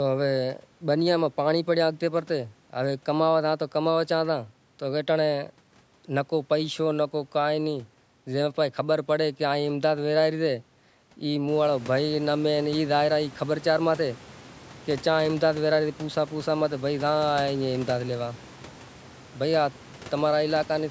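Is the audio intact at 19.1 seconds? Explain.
Yes, the audio is intact at 19.1 seconds, with no technical fault at that moment.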